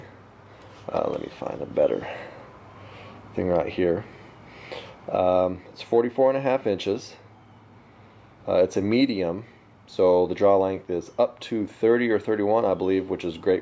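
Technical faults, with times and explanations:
No technical faults can be heard anywhere in the recording, and the signal stays steady and continuous with nothing to flag.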